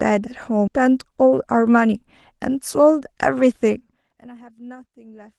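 Speech with two timing faults. At 0.67 to 0.69 s there is a skip ahead: roughly a second of audio was dropped and playback jumps straight to later material with no fill, so the waveform shows an abrupt splice and the spectrogram's formant tracks break off and restart mid-pattern. From 1.25 to 1.97 s a jitter buffer speed-up plays the speech at 108% of normal speed at unchanged pitch, trimming around 70 ms in total by cutting out short pitch-period pieces, so it sounds slightly hurried. On a spectrogram the harmonics stay at the same spacing while syllables look compressed in time, and the waveform shows tiny seams at the cut points. Both faults come through an Opus call path whose spectrum stops near 12 kHz.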